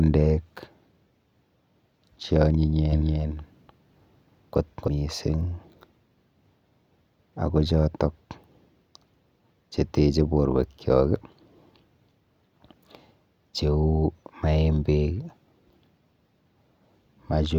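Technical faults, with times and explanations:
2.92–4.88 s, doubled audio track: the speech repeats at equal loudness roughly a third of a second behind, starting and stopping abruptly, likely from a second, slower capture path.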